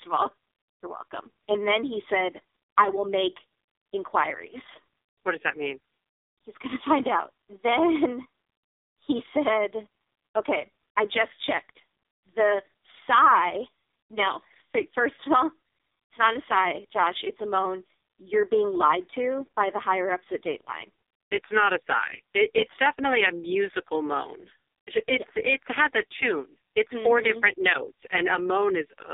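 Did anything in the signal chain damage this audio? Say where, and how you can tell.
Yes. The codec stage did, throughout the whole clip: this is AMR narrowband mobile codec damage. Nothing passes above 3.7 kHz, and the band sits roughly 300 Hz to 3.7 kHz. The speech sounds heavily buzzy and synthetic. That fits a very low mode around 4.75 kbps, where a few pulses per subframe drive a vocal-tract model.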